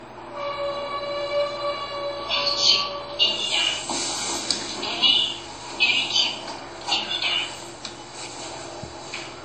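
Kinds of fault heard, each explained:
Low-bitrate audio saved at a high bitrate: the sound was likely squeezed through a very low-bitrate codec, around 32 kbit/s WMA, then re-encoded as high-bitrate MP3. The lost detail stays lost, its coding artefacts remain, and nothing is present above 19.1 kHz.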